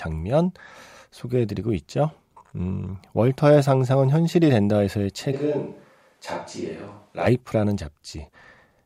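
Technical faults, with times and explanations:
5.35–7.25 s, switch to a distant microphone: speech abruptly turns hollow and thin and drops about 5 dB, likely from a farther microphone; unlike added reverb, it switches in and out instantly.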